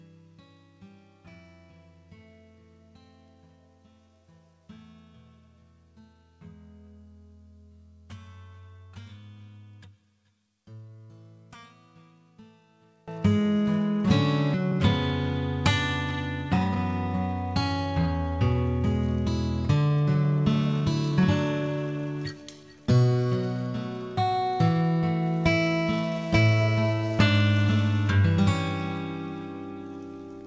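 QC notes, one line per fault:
0.00–13.08 s, one channel inverted: in mono the sound drops by about 26 dB. Centred material nearly disappears, leaving only a faint residue of whatever differs between left and right. The likely cause is reversed polarity on one stereo channel, so the shared content cancels when summed. The spectrogram shows a weak, low-energy band. The waveform is markedly smaller until 13.08 s, where full level returns.
14.54 s, skip ahead: playback jumps forward with no gap, and roughly a second of audio is simply missing. The material on either side is butted together, so the sound lurches abruptly instead of fading or pausing. This happens when a stretch is discarded, as when a jitter buffer overflows, and playback resumes from audio already waiting. The waveform shows a hard discontinuity with no silence. The spectrogram shows an abrupt change in content at a single vertical line.
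16.52–16.76 s and 19.75–22.06 s, jitter buffer speed-up: the buffer had built up excess delay and trimmed it away by cutting short pitch-period-sized pieces in rapid succession, about 200 ms in each case. The first run plays at about 201% speed and sounds sharply rushed. The second plays at about 110% and is a subtler hurry. Pitch is unchanged throughout, and everything above 8 kHz is absent. On a spectrogram, harmonic lines stay level while events crowd closer together in time. The waveform looks compressed horizontally.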